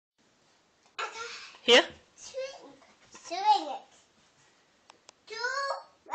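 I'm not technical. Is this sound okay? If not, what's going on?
Yes, nothing here stands out as a technical problem, so there's nothing you need to fix.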